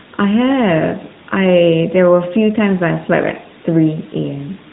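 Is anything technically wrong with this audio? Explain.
Yes. Throughout, the speech carries the AMR narrowband mobile codec sound. Nothing passes above about 3.8 kHz, leaving it dull and telephone-like. The codec's pulse-driven vocal-tract model makes the voice plainly buzzy and synthetic, consistent with a high-rate mode near 10.2 kbps.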